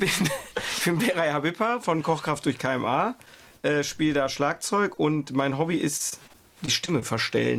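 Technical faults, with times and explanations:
5.97–7.04 s: repeated packet loss (robotic sound). Six short holes, the longest 23 ms and about 120 ms in total, are each bridged by extending the preceding sound, so roughly a tenth of this stretch is patched and the audio turns choppy with pieces missing.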